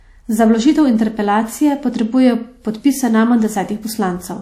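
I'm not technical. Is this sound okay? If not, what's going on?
No. All through the speech, the sound carries the mixed damage of being squeezed more than once. The very top end is gone too: nothing reaches above about 15.8 kHz. This is likely transcoding between lossy codecs. The audio was squeezed once, perhaps as WMA, then squeezed again as MP3. Each step added its own damage, and you hear both together.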